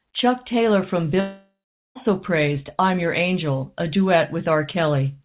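Speech, carried over a narrowband call path whose spectrogram shows nothing above 4 kHz, consistent with G.711 mu-law at 64 kbps. From 1.2 s to about 1.97 s there is a long network dropout, likely from lost packets. The last sound is extended as a fading buzz, then about 0.41 s of near-silence follows before the audio resumes at "praised I'm" with roughly 0.76 s of material missing. On a waveform this appears as a decaying smear collapsing to a flat line. On a spectrogram it appears as blurred, repetitive bands fading to an empty gap.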